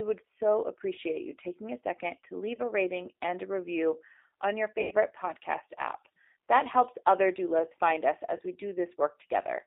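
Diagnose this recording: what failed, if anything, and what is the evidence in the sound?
G.729 codec, throughout the 9.7-second speech clip. This is the codec stage. The band is confined to roughly 300 Hz to 3.7 kHz, and there is plainly audible roughness and a synthetic edge on every phrase, which fits an 8 kbit/s G.729A encode. The decoder rebuilds each 10 ms frame from a vocal-tract filter, a pitch predictor and a few pulses. The waveform detail it discards comes back as that buzzy, slightly artificial texture.

VoIP packet loss concealed by the speech codec, at 2.55–2.59 s after "taking a second to" and before "a rating and a", at 4.81–4.95 s after "a review on your", and at 8.37–8.40 s after "other doulas find us". This is a network fault. About 20 ms of audio is missing at the first and third points and about 100 ms at the second, which suggests one lost packet, then a run of several. 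The decoder extrapolates from its last pitch and filter settings and lowers the gain as it goes. The result is a brief stretched, fading sound, longest at 4.81 s, and the speech stays weak for a short time after the packets return.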